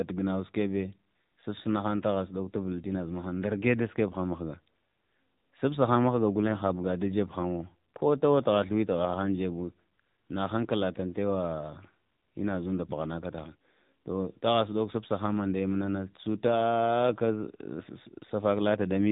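From start to finish the speech carries AMR narrowband mobile codec damage. It is plainly audible. Everything above 4 kHz is gone, so the sound is dull and boxy. The voice turns buzzy and synthetic, which fits a low AMR-NB mode near 7.4 kbps.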